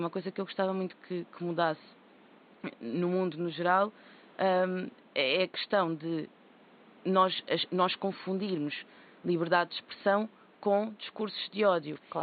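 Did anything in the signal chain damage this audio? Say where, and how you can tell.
No, nothing stood out on listening that would point to damage at any stage of the chain, and the faint room noise, about 29 dB below the speech, belongs to the recording space.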